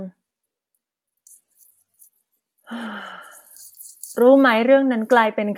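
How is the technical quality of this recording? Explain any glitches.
No glitches or technical faults can be heard here.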